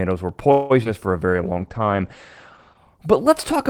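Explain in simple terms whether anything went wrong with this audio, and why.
At 0.51 to 0.72 s there's a call audio freeze: the last sound hangs on as a fading buzz just before "for a", likely because packets got stuck in transit. Then at 0.84 to 0.87 s, short concealed packet loss leaves a quick smear where the receiver patched a tiny missing piece, again right before "for a". From 1.35 to 2.85 s, just after "for a", a call bitrate drop makes the speech sound rough and muffled, with the top end cut off above about 8 kHz.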